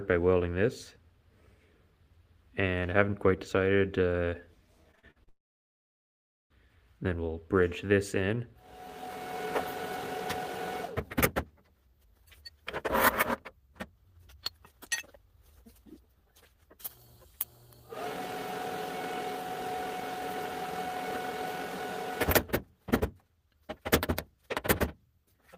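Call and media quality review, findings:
Choppy, robotic sound, 4.91–5.29 s. Repeated packet loss (robotic sound): five short gaps, longest 46 ms, each patched by extending the preceding sound; roughly 40% of the stretch is concealment. Jitter buffer/PLC repeatedly filling network holes.

Sound cuts out at 5.29 s after a brief fading buzz or hiss, leaving near-silence for about 1.15 s until 6.52 s; the missing 1.2 s is never recovered. Likely a long network dropout: receiver concealment runs out and then outputs silence.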